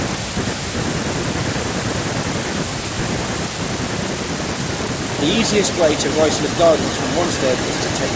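A speech recording with an echo leak from 5.18 s to the end: a fainter copy of the voice trails it by about 335 ms, roughly 15 dB below the direct sound. The far end was likely on a loudspeaker whose echo canceller let part of the returned signal through. On a spectrogram, speech energy patterns reappear about a third of a second later, weaker. In the waveform, low-level delayed copies of the voice appear after the direct sound. The call microphone processing leaves nothing above 8 kHz, so the spectrogram is empty above that line.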